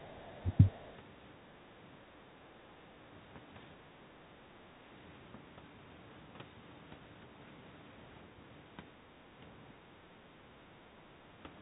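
A speech recording from a call, band-limited to nothing above 4 kHz in a way that fits a narrowband G.711 path, with two linked faults packed into its first second and a half. The other side's voice leaking through appears at 0.00–0.09 s, 0.31–0.42 s and 0.58–0.97 s as a faint second voice underneath, roughly 35 dB below the talker and nearer 30 dB down in the longest stretch. It is most likely loudspeaker playback that the echo canceller failed to subtract from the microphone. What sets it apart is that something is added: a separate voice that does not belong to the talker. Speech suppressed in double talk works the other way, removing sound. At 0.14–0.24 s, 0.42–0.55 s and 1.54–1.59 s the talker's own voice dips by up to about 20 dB, and by about 15 dB in the last, briefest dip. The likely cause is the canceller mistaking overlapping speech for echo and pulling everything down. These dips sit right beside the leaked fragments, and one follows directly at 0.42 s, so the pattern reads as the canceller struggling while both sides spoke.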